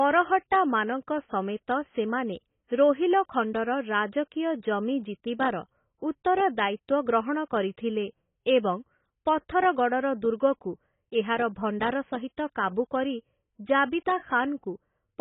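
Throughout the speech, heavy AAC compression is the likely cause: the AAC-LC encoder appears starved of bits, consistent with about 16 kbps. It discards everything above 3.8 kHz and coarsely quantises the rest, so the sound is dull and smeared, with warbling, fizzy sibilants.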